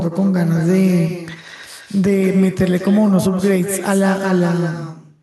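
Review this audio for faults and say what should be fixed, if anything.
Echo with no canceller runs through the whole speech clip. Every phrase returns about a fifth of a second later, roughly 10 dB quieter and thin. The far end's loudspeaker feeds its microphone, and nothing removes that path before it returns. Fix it by enabling acoustic echo cancellation at the far end, or by having that side use a headset.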